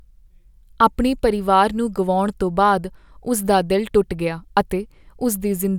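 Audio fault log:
No faults detected anywhere in the speech recording.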